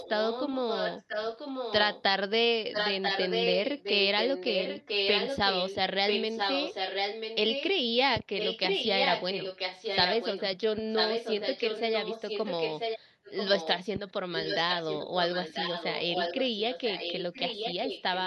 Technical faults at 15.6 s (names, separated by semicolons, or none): echo leak